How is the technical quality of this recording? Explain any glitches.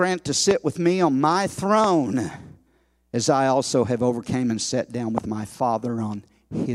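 The recording is marred by three loud pops in this speech, at 0.51 to 0.53 s, 1.84 to 1.86 s and 5.18 to 5.20 s. Each is a single sharp click about 20 ms long. The first jumps roughly 20 dB above the speech, and the later two about 15 dB. The likely cause is a brief voltage spike, such as static or a connector or driver hiccup, landing on the signal. The speech carries on right through each one.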